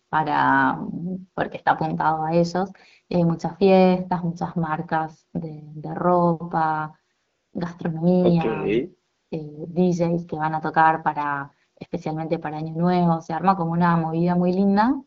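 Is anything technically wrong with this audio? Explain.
Yes, there's AMR comfort noise in two pauses, at 7.15 to 7.53 s and 9.13 to 9.31 s. The phone stopped sending speech frames, and the receiver filled the gaps with smooth synthetic hiss that replaces the real background. The wideband coding sounds fairly clean, which fits around 12.65 kbit/s, with only light codec damage.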